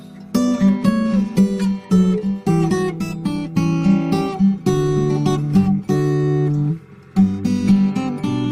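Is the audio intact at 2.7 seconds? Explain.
Yes, the audio is intact at 2.7 seconds, with no dropout, glitch or other fault at that point.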